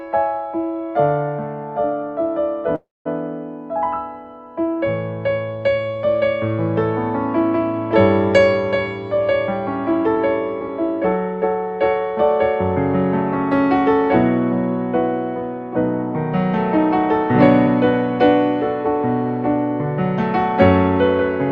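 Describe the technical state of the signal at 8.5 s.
At 8.5 s the signal is intact, with no dropout, glitch or distortion, only the ordinary coding character of the call path, whose bandwidth fits a super-wideband setting reaching to about 12 kHz.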